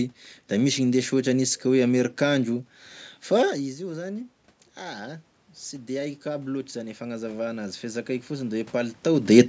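Speech whose level drops near 3.5 s as the talker moves back, then voice and room noise swell together from 3.55 to 9.04 s, rising about 10 dB: automatic gain rising, as the control slowly compensates for the roughly 14 dB quieter input.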